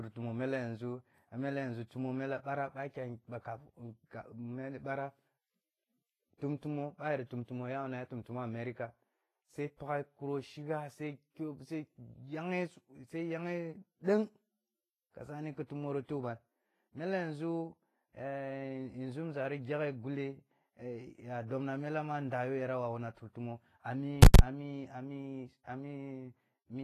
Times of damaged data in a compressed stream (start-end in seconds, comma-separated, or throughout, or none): none